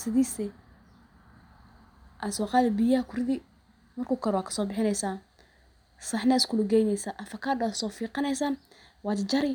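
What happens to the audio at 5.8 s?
Nothing goes wrong at 5.8 s; the speech continues intact through that moment with no audible fault.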